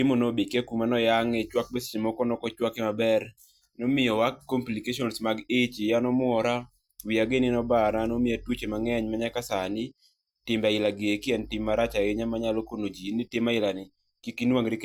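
Nothing stood out on listening to this speech recording.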